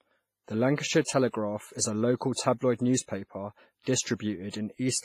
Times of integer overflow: none

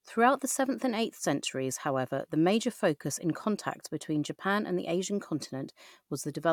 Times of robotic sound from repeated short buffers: none

